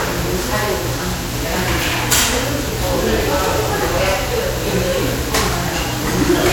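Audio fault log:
Throughout: generation loss. The whole clip sounds swirly, hollow and smeared, with blurred attacks and more damage than a single lossy pass would leave. The likely cause is repeated MP3 re-encoding, around four passes at a rate that fits 96 kbit/s, each quantising on a shifted frame grid so noise and spectral gaps pile up.
1.60–2.37 s and 6.08–6.52 s: hard clipping. Harsh fuzzy crackle rides on the loud parts of both stretches. The signal was driven about 5 dB beyond what the stage could pass, so peaks were sliced flat, and those flat tops spray harmonics high into the spectrum.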